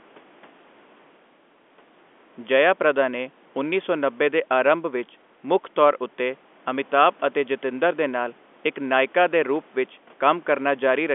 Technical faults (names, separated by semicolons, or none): none